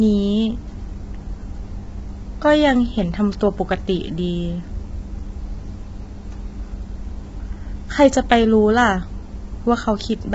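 From start to finish the speech sounds rough and grainy, with a hiss-like fill between the harmonics and nothing at all above 7.7 kHz, so the top end is simply gone. That heavy damage is likely low-delay AAC compression, the AAC-ELD kind used on video calls, squeezed to a rate that fits around 16 kbps. With so few bits its frequency lines are coarsely quantized, so the gaps between the pitch harmonics fill with noise and the voice turns gritty.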